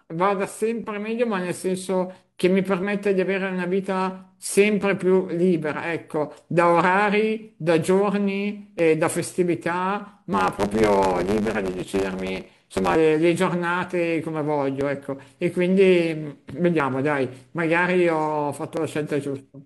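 It's a speech clip with two problems. First, overlap between stream segments: small clicks or skips at 0.84, 2.83, 4.81, 8.79, 14.81, 16.80 and 18.77 s, each dropping roughly 20 to 40 ms. They land on a 2-second grid because overlapping timestamps make the player trim real audio at each segment join. Second, from 10.32 to 12.95 s there's a block size mismatch (truncated). The tail of each block gets thrown away, so you hear a 100 Hz buzz at the block rate, and the speech runs about 1.09 times fast.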